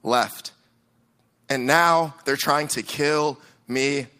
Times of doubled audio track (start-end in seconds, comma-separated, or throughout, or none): none